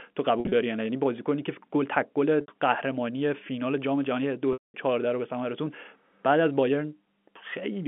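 Packet loss with pitch repetition occurs at 0.40–0.52 s, 2.41–2.48 s and 4.53–4.74 s. Each time, missing packets are bridged by looping the last pitch period, giving a brief buzzy hold. The 210 ms gap fades toward silence before the telephone-band sound cross-fades back.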